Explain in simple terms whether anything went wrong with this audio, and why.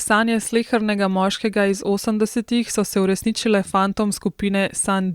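Nothing in this speech recording stood out as a problem when listening to it.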